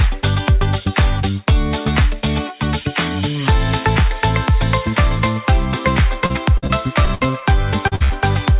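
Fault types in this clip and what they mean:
Repeated packet loss (robotic sound): From 6.26 to 7.44 s the stream breaks up nine times in quick succession, with the longest gap 60 ms and about 240 ms missing in total. Each hole is bridged by stretching the preceding sound, so roughly a fifth of that stretch is synthetic fill. With one patch following hard on the last, the sound turns choppy and mechanical, with fragments dropped throughout.
Short concealed packet loss: At 7.88 to 7.93 s about 40 ms of audio failed to reach the decoder in time. The receiver covered it by extending the last sound, pitched continuation if voiced and shaped noise if not, then blending back into the real signal. It passes as a brief smear or wobble rather than a clear gap.
Burst of packet loss: Two runs follow almost immediately, at 7.95 to 8.02 s and 8.04 to 8.12 s, losing about 40 ms and 60 ms respectively. 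The receiver kept the previous sound going for roughly 50 ms each time while fading it down, giving a held buzz or dying hiss. Playback then picks up further along, so the material inside each burst is simply absent.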